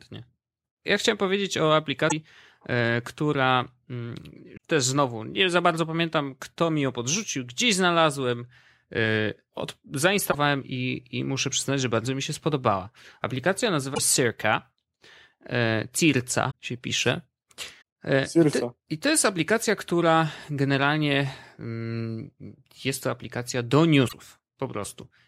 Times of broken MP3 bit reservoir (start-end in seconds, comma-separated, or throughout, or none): 2.08-2.12, 4.56, 10.31-10.35, 13.94-13.99, 16.50-16.53, 17.80, 24.07-24.13